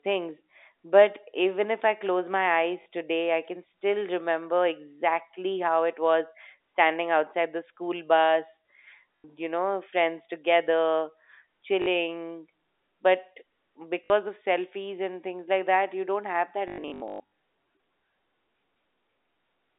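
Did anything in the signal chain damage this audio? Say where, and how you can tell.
Yes, at the network stage: packet loss with last packet repeated. Brief robotic stutters occur at 2.82 s (40 ms), 9.17 s (80 ms), 11.82 s (40 ms) and 14.04 s (60 ms), then a scattered cluster from 16.68 to 17.24 s, with runs up to 120 ms. The receiver replays the last packet, which fits 20 ms packets, so the loops buzz near 50 Hz. On a waveform these show as identical repeating blocks. On a spectrogram they appear as vertical seams and frozen harmonics within the 250 Hz to 3.7 kHz G.711 telephone band.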